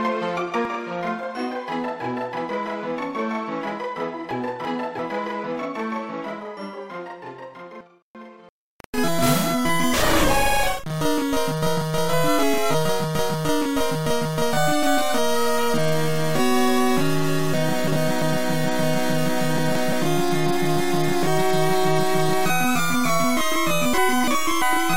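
From 0.65 s to the end, a channel delay causes doubling. One channel runs 40 ms behind the other. The two are then summed to mono. At 40 ms the late copy does not blend in. It sits just behind the original as a tight slap at equal level. Every onset sounds twice, giving the sound a thick, stuttering edge.

Frames out of order then appear five times. They occur at 4.31 to 4.99 s, 7.81 to 8.49 s, 17.54 to 18.22 s, 19.58 to 19.93 s and 23.94 to 24.62 s. In each, two adjacent blocks play in swapped order. Most blocks are about 341 ms each, which fits runs of four frames. The event at 19.58 s swaps shorter blocks of about 171 ms. Each stretch sounds like a garbled flutter. Nothing goes missing. The order is simply scrambled.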